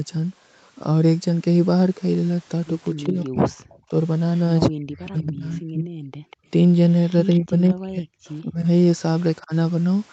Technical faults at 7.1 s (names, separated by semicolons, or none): echo leak